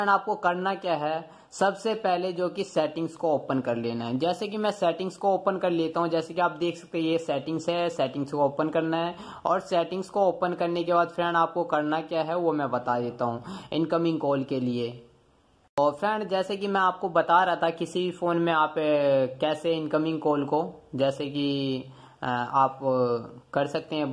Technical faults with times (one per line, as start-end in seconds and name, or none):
none